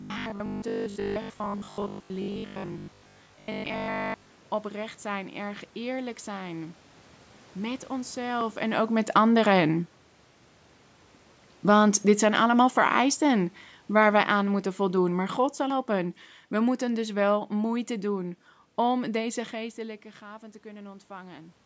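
A speech recording with three technical faults. From 0.02 to 4.32 s the voice has robotic sound from repeated short buffers: a rigid, metallic 50 Hz buzz. Most of that stretch is likely repeated 20 ms chunks standing in for skipped audio. At 8.41 s there is a small jump, likely from a dropped buffer (overrun), with about 10 ms of sound lost. From 11.53 to 17.87 s, automatic gain falling lowers the level by about 10 dB, and the voice and background sink together.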